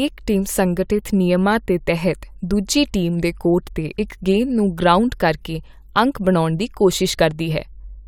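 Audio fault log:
No fault found.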